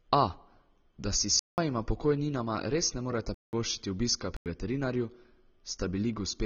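Throughout, the speech is dull and plainly warbly with nothing above 6.9 kHz, the signature of AAC compression, likely AAC-LC at around 24 kbps. A plain low-pass filter would leave the band below the cut-off clean, not smeared and fizzy on sibilants.

At 1.39 s, between "da si s" and "pokojninama res ne", the sound drops abruptly into a block of digital silence lasting about 0.19 s. A second identical 0.19 s hole follows at 3.34 s, and a shorter 0.09 s one at 4.37 s. The lengths sit in a 2:1 ratio, which fits whole output buffers of 8192 and 4096 samples going unfilled. Packet loss would more often be smoothed over or filled with noise, but these holes are plain silence with hard edges.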